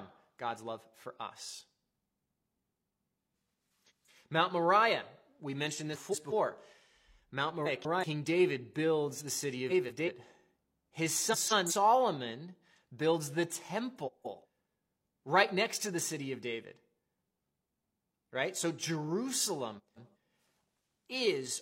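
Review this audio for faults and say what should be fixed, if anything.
Frames out of order garble the speech at 2.42–2.79, 3.86–4.09, 5.93–6.33 (after "we mentioned"), 7.65–8.04, 9.69–10.09 (after "builds the city"), 11.32–11.72, 14.06–14.45 and 19.78–20.15 s. In each stretch two adjacent runs of about 186 ms, which fits four frames each, swap places, giving a fluttering jumble. No time is lost. A spectrogram shows broken, jumping formant tracks with vertical lines at the joins, and a waveform shows abrupt steps. To fix this, reorder packets by sequence number or timestamp in the jitter buffer before decoding.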